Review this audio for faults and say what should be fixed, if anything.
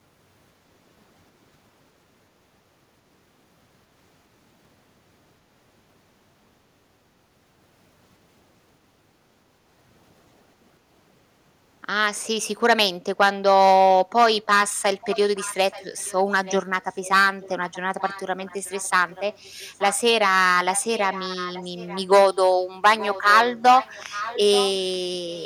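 At 10.78 to 10.89 s, the background is gated by the echo canceller. The room sound dips by about 6 dB for roughly a tenth of a second, then comes back. The canceller pulled the microphone down hard while the loudspeaker played. Gentler suppression settings in the canceller would prevent this.

From 15.01 to 16.54 s, 16.9 to 19.95 s, 20.73 to 22.36 s, 22.99 to 24.94 s and 25.32 s to the end, a faint copy of the speech trails it by 879 ms. It sits roughly 15 to 25 dB below the speech. This is likely an echo leak. A loudspeaker played the call, and the echo canceller let part of the microphone pickup return down the line. Using a headset or retuning the canceller for this delay would prevent it.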